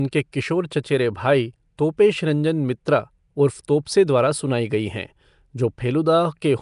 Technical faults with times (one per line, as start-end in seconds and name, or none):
0.00-6.61 Nellymoser compression
3.85 pre-echo